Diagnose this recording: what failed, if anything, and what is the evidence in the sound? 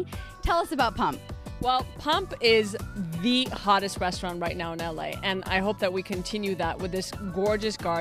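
A voltage transient most likely entered at the analogue wiring stage, from a plug, switch or static discharge, and was added to the signal. At 3.56 to 3.58 s a single loud pop, roughly 10 dB above the surrounding sound, sits on top while the audio continues underneath.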